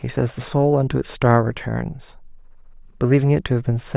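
No technical faults are audible.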